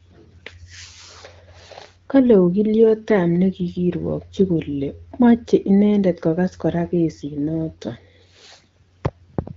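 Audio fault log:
No faults heard in this speech clip.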